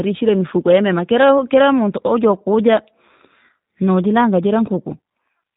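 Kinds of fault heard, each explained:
G.729 codec, throughout the clip: the speech has passed through a low-bitrate VoIP coder that keeps only a vocal tract filter, a pitch predictor and a handful of pulses for each 10 ms frame, consistent with G.729A at 8 kbit/s. The damage is plainly audible. Everything above 4 kHz is gone, so the speech sounds muffled and telephone-like, and the rebuilt excitation gives it a rough, slightly synthetic buzz throughout.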